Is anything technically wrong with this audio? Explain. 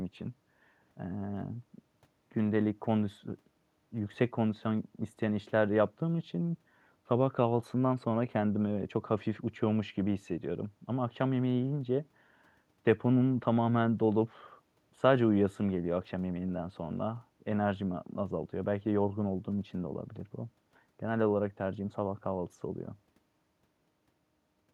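No, nothing technically wrong can be heard in this recording: the signal holds steady and continuous throughout, with no audible defects at any point.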